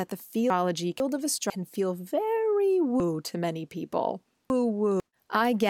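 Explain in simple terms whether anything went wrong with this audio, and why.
Chunks out of order at 0.5 to 1.5 s and 3.0 to 5.0 s. Half-second pieces play in the wrong order, so the speech jumbles.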